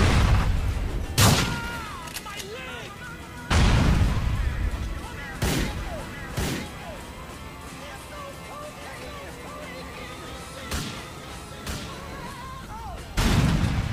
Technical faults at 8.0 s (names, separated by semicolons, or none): doubled audio track